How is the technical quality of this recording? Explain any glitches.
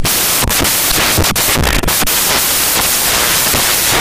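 The technical quality is poor: from start to finish the speech is overlaid with loud, harsh broadband noise caused by samples built from the wrong bytes. Each sample's bytes are being assembled incorrectly, whether offset by one byte, in swapped order, or under the wrong alignment, so the rapidly fluctuating low-order bits end up as the dominant part of each value. The result is a harsh hiss, close to white on the louder sounds. On a waveform it looks like a dense block of noise. A spectrogram shows broadband energy spread across the frequencies.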